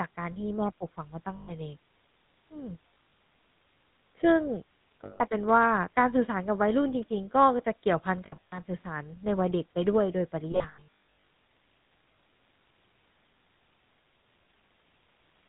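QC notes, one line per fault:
Throughout: GSM full-rate codec. The speech has a plainly audible buzzy, gravelly roughness and a dull top with nothing above 4 kHz. The codec models the vocal tract and excites it with regularly spaced pulses, keeping only every third excitation sample. At 13 kbps that coarse excitation is what turns smooth voicing into grit, and the narrow band removes the brightness of consonants.
1.36–1.51 s, 2.89–3.12 s, 5.04–5.22 s, 8.26–8.59 s, 10.52–11.27 s: lost GSM frames. Each gap brings a rough, metallic ring where the sound freezes. The decoder substitutes the last good frame's settings and repeats them. The 1.36 and 5.04 s events are solid runs of 120 and 160 ms. The others are scattered losses, with the 10.52 s stretch the worst: about 540 ms lost across 760 ms, with its longest run around 150 ms.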